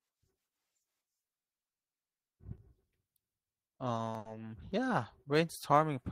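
A speech recording in which, from 4.18 to 4.27 s, a sound is held unnaturally long with a slight buzz or dip: a short stall from a late packet. The jitter buffer ran dry, so about 70 ms was filled by stretching the last audio, then playback resumed without losing anything, now 70 ms later.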